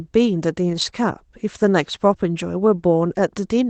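From 0.69 to 0.83 s, lost packets rebuilt from error correction: 80 ms played from low-bitrate Opus copies, rougher and noisier, but with no gap.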